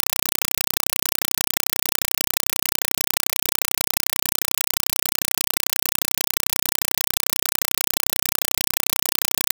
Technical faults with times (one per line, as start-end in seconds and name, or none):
0.00-9.54 compressed stream played as audio